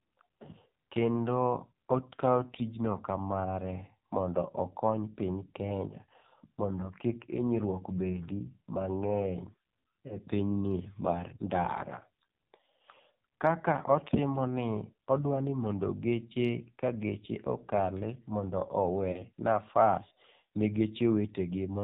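Throughout, the speech is cut off above 4 kHz and sounds buzzy and synthetic, the mark of the AMR narrowband mobile codec under heavy compression, which fits a low mode near 6 kbps, unlike a plain low-pass filter.

At 10.08 to 10.18 s, lost AMR speech frames cause a brief warbling dip: the decoder replays the last pitch at falling gain. At 19.12 to 19.21 s, just before "nafas ne", the sound smears and fades, which fits two lost frames, unlike a hard gap.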